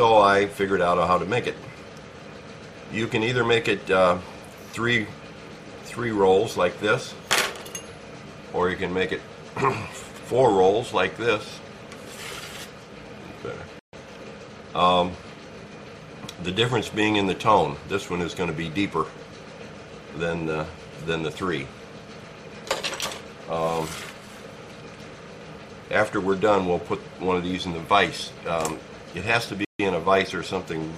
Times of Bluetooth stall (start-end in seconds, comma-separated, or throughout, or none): 13.79-13.93, 29.65-29.80